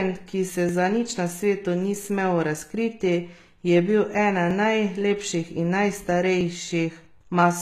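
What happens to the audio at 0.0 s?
From 0.0 s, and through the whole clip, the speech has plainly audible coding damage. Nothing sits above 14.9 kHz, and s sounds turn gritty and lispy. The likely cause is HE-AAC compression: the treble is rebuilt from copied lower bands, which fits a bitrate near 20 kbps.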